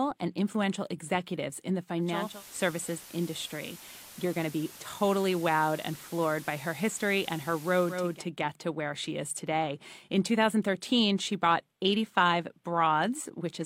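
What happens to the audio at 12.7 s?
Nothing goes wrong at 12.7 s; the speech carries on intact through that moment.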